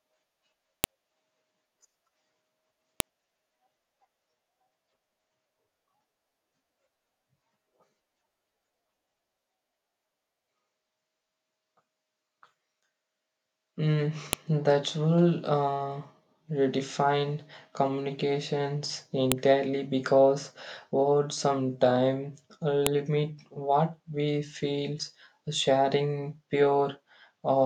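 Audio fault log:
0.84, 3.00, 14.33, 19.32 and 22.87 s: file header played as audio. Each is a sharp, loud click where a new piece of the speech stream begins. The joins kept their WAV headers, so those few dozen header bytes were decoded as sample values, producing an abrupt spike unrelated to the surrounding sound.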